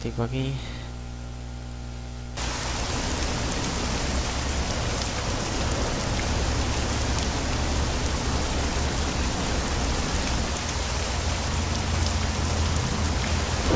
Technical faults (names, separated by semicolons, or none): none